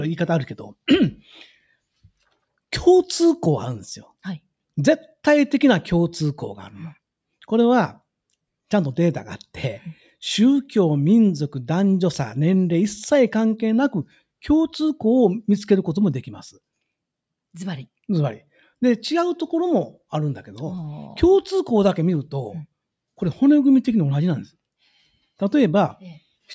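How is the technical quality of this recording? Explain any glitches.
No glitches or technical faults can be heard here.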